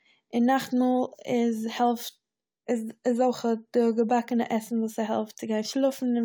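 No technical faults are audible anywhere in the recording.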